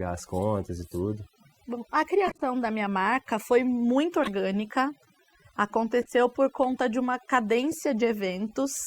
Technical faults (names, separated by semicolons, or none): overdone noise removal; corrupt frame decoded